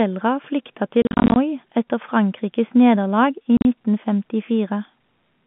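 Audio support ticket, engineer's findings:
Packet loss filled with silence at 1.02 to 1.36 s: about 210 ms dropped in short holes, runs up to 40 ms, hard edges. Again at 3.57 to 3.65 s, 70 ms missing. Gaps fit 10 ms packets; jitter buffer/network, no concealment, over a clean G.711 line.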